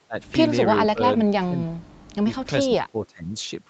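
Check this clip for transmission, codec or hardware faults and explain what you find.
The speech drops out four times: 0.07–0.18 s, 0.9–1.0 s, 1.17–1.91 s and 2.65–3.32 s. Each dip is about 20 to 25 dB deep. The likely cause is speech suppressed in double talk. The echo canceller confused the talker with loudspeaker echo and attenuated both.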